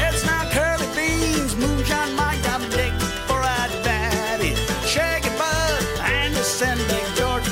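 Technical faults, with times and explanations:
Nothing technical stands out here; I can't hear anything going wrong anywhere in this audio.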